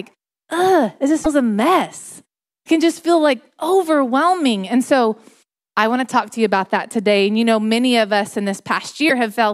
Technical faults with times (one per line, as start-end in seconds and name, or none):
1.24-1.26 broken MP3 bit reservoir
9.09-9.11 broken MP3 bit reservoir